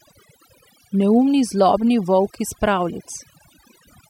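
A short speech recording suffers from overdone noise removal across its whole length, about 4 seconds. Noise reduction set too aggressively has pulled every frequency band near its noise estimate down to almost nothing, taking the softer parts of the voice with it. The gaps fall to near silence dotted with twinkling specks. A spectrogram would show a dark, empty floor scattered with isolated bright dots and ragged, hollowed-out speech harmonics.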